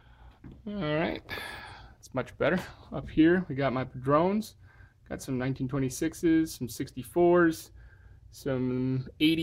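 There are no technical faults to describe at any point in this clip.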